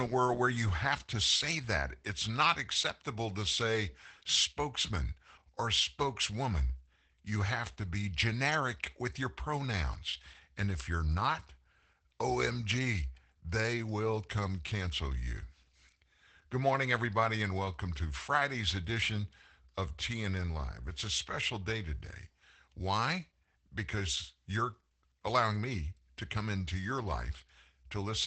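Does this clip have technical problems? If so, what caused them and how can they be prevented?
Yes. Opus voice compression runs throughout this speech. The SILK coder at a low bitrate, around 12 kbps, codes the excitation coarsely. The voice sounds muffled, slightly hoarse and robotic. Nothing is present above about 8.8 kHz. Preventing it means encoding at a higher bitrate, or sending the audio uncompressed.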